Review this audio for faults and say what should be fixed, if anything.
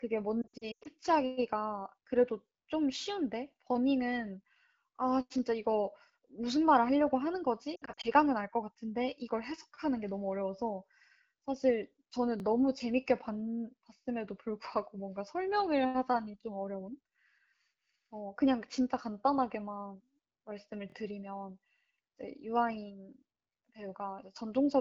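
Lost AMR speech frames at 0.42–0.88 s and 7.76–8.06 s: the decoder conceals failed frames by repeating the last pitch and vocal tract settings at falling gain. On a spectrogram, harmonics smear flat and fade before speech returns. Stronger radio error protection or better coverage would reduce these losses.

Repeated buffer at 12.40 s, with one repeat, and 20.90 s, with two: late audio made the device replay its last 23 ms block, which fits a 1024-sample buffer. This causes a stutter that shows in the waveform as identical copies with hard joins. A larger playback buffer or higher audio thread priority would prevent these underruns.

The AMR wideband (HD Voice) codec at 12.65 kbit/s adds only light coding damage.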